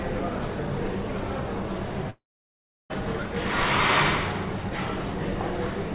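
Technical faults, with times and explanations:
2.1–2.92 s, long network dropout: the sound stops for about 0.8 s and that part never returns. The first tenth of a second is a smeared, fading buzz continuing the last sound, then roughly 0.7 s of silence. Playback resumes further on, not delayed. That pattern of concealment fading to nothing points to a likely stall in packet arrival, unlike a short loss, which is patched in milliseconds. The band-limited 4 kHz ceiling is unchanged on both sides of the gap.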